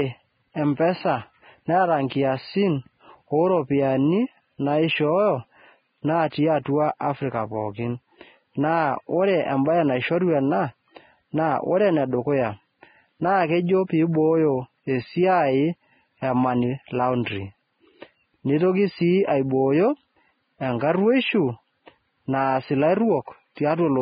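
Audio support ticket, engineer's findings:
Vorbis compression, throughout. Band-limited audio, nothing above about 4.9 kHz. Hissy, grainy upper band where fine detail has been replaced by noise of similar energy. Roughened tonal parts, blurred onsets. Likely cause: Vorbis encoding at heavy damage, consistent with a very low bitrate near 15 kbps. Cut-off lowered, treble residue quantised too coarsely to keep detail.

Pre-echo at 23.55 s. Brief hiss leading a sharp attack by about 20 ms; the attack itself sounds softened and smeared. Component: the transform codec above. Quantisation noise sized for the loud onset spread across the whole block, filling the quiet span just before it.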